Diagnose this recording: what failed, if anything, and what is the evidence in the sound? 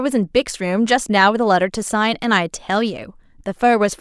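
Nothing stood out on listening to this speech recording that would point to a failure at any stage of the chain.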